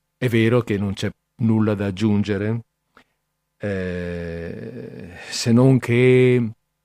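Listening through the speech recording, nothing stood out as a technical fault at any point.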